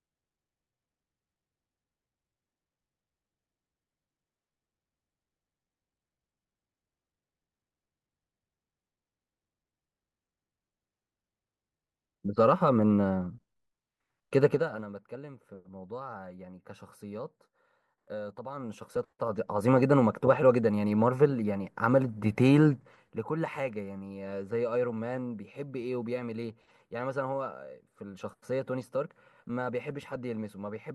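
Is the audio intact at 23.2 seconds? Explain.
No. From 22.70 to 23.25 s a fine ticking, zipping texture rides on the speech as it drops about 10 dB. This is zipper noise: the gain falls in unsmoothed 1 dB steps, around twenty per second, each step clicking.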